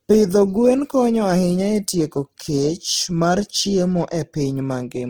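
Opus compression throughout, likely around 16 kbps in music mode: starved bands get folded or noise fill, so the speech sounds plainly rough and grainy.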